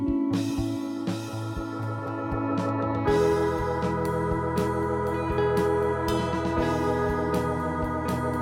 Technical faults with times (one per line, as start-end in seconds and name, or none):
none